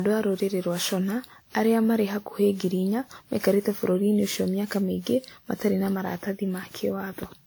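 Generation loss runs through the whole clip, likely from repeated WMA encoding at 96 kbit/s, around seven passes. Each pass requantises on a shifted frame grid, so noise and spectral holes accumulate. The speech sounds swirly and hollow with smeared attacks, though the bandwidth still reaches 20.1 kHz.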